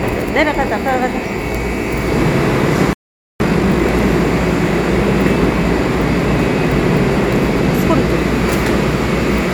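At 2.93 s the sound just drops out mid-flow and stays silent until 3.40 s, a gap of about 470 ms. That's a playback stall: the player most likely ran dry on buffered data, or its output thread got held up, so nothing reached the output until it recovered. When the audio comes back, it carries on after the gap.

From 3.40 s to 3.86 s you get the time-compressed catch-up. The player is working off the backlog from that stall by snipping out small slices and cross-fading the remaining pieces together, running at about 2x speed for roughly half a second. The pitch doesn't shift, but the sound feels rushed before it settles back to normal pace.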